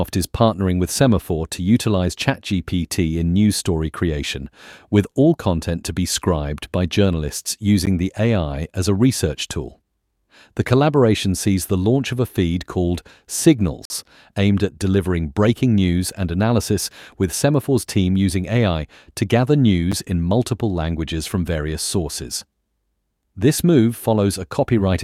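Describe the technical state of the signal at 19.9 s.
At 19.92 s, between "to gather" and "in multiple languages from", there is a gap between stream segments. The time stamps of two adjoining segments don't meet, leaving about 8.5 ms unfilled. The player inserts silence there. A brief, hard-edged hole cuts the speech, with nothing lost.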